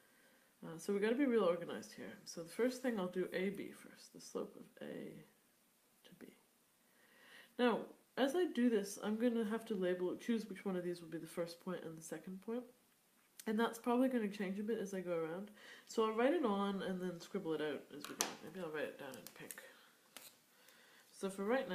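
No technical faults can be heard anywhere in this recording.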